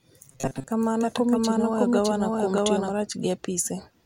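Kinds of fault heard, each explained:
Robotic sound from repeated short buffers: from 0.32 to 0.68 s the speech turns to a rigid metallic buzz near 133 Hz, likely tiny chunks looping while most real audio gets skipped.
Doubled audio track: from 0.82 to 3.0 s a second, equally loud copy runs about 0.7 s behind, likely a duplicate capture path, starting and stopping abruptly with no room colour.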